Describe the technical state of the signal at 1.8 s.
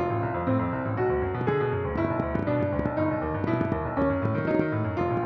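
At 1.8 s you're early in a train of clicks running from 1.41 s to 5.18 s. That's about 6.4 clicks per second, unevenly spaced and poking well above the sound, most likely from interference or a faulty connection or power supply. It's heard as scattered popping throughout.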